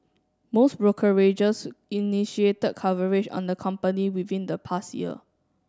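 No technical fault can be heard anywhere in the speech recording.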